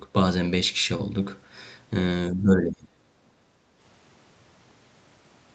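From 2.31 to 3.03 s, the speech dips sharply, by roughly 30 dB. It is likely speech suppressed in double talk, where the echo canceller mistook overlapping talk for echo. From 3.35 to 3.78 s, the background is gated by the echo canceller. The room sound drops by about 6 dB, then returns.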